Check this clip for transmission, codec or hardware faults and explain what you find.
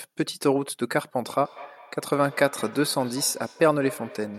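One fault is present. From 1.45 s to the end of the speech, each stretch returns as a faint repeat roughly every 200 ms, peaking about 18 dB below the speech. This is feedback echo between two devices: one device's loudspeaker replays audio that its neighbour's microphone captures again, beyond either echo canceller's reach.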